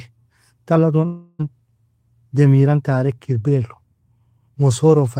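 From 1.05 to 1.41 s the speech breaks off, and the last sound is stretched into a fading buzzy hiss that covers the whole gap before the talker returns with roughly a third of a second simply gone. That's likely a long network dropout.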